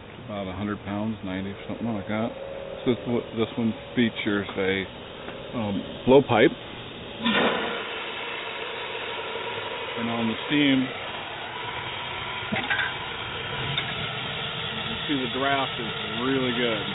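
Nothing goes wrong here; the sound simply stops at about 4 kHz, which fits an ordinary narrowband call codec such as G.711 A-law doing its usual job.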